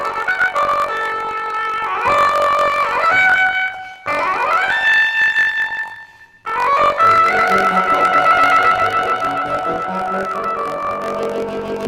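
From start to finish the audio plays an octave too high, with a rapid flutter at about 47 Hz running under it, yet the overall pace stays correct. This is planar audio read as interleaved: each block of about 21.33 ms, which fits a 1024-sample block, stores all left samples before all right samples, but is read as alternating pairs. Each block's left half and then its right half play back at double speed.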